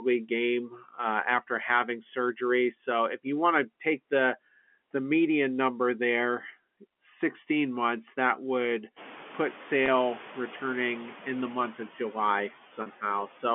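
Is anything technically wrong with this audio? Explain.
Yes. Noise suppressor artifacts run through the whole clip. The suppressor pulls the background down by about 14 dB between phrases, so the noise floor pumps up and down on a spectrogram. The background from the room itself, which rises by about 21 dB near 9 s, is part of the recording.

Speech cut by the noise suppressor occurs from 0.70 to 0.98 s. The suppressor mistook quiet speech for noise and dipped it by up to about 8 dB. The waveform envelope visibly thins there, and the sound comes across as swallowed.

Packet loss with pitch repetition occurs from 9.86 to 9.88 s and from 12.82 to 12.86 s. These gaps of 20 ms and then 40 ms were bridged by repeating the last pitch cycle. The waveform shows identical repeated cycles, the spectrogram shows frozen harmonics, and the result is heard as a brief buzzy hold.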